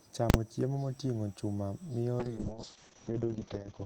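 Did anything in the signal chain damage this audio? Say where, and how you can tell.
Yes, two stages left marks. At 0.30 s, just before "chiemo moting'o chuma miyo", there is a violent bang that lasts about 40 ms and leaves no sound in the middle. This is invalid numbers at full scale. A calculation in the processing or sample-format stage produced infinite or invalid values, and conversion clamped the whole 40 ms block to the maximum level. The result is a hard square jolt rather than anything acoustic.

From 2.20 s, right after "chiemo moting'o chuma miyo", the speech turns rough and watery. It also goes muffled, because everything above 8 kHz disappears from a band that previously reached 20 kHz. This persists to the end, and the worst stretch lasts 1.5 s. That is a call bitrate drop in the codec stage. The bandwidth estimate fell, so the encoder went from 32 kbps to 6 kbps, coding more coarsely and narrowing its audio bandwidth.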